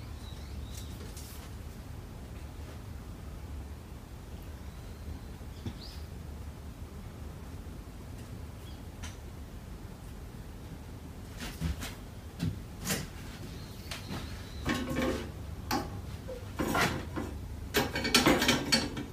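Nothing goes wrong anywhere in this one, so there's no technical fault to point out at any moment.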